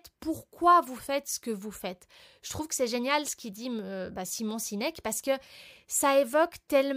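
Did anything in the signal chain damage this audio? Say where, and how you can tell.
No, nothing in the chain from capture to playback has left an audible mark on this speech recording.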